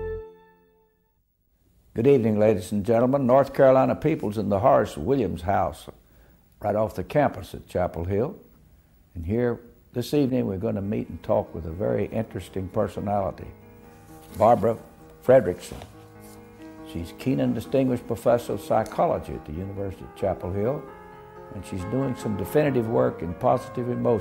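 No faults can be heard anywhere in the audio.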